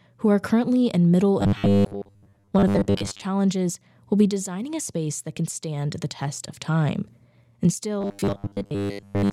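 This speech clip has robotic sound from repeated short buffers in two places. The first runs from 1.41 to 3.23 s, right after "are currently in middle". The second starts at 8.01 s, after "test of time and", and lasts to the end. Both turn the speech into a rigid metallic buzz at 100 Hz. The likely cause is late audio being covered by looping a 10 ms slice, with most of the real sound skipped.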